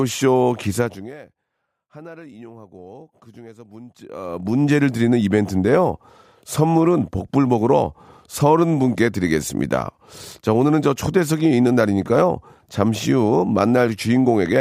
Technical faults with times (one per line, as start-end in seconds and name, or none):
0.78-1.17 zipper noise
3.99-4.64 zipper noise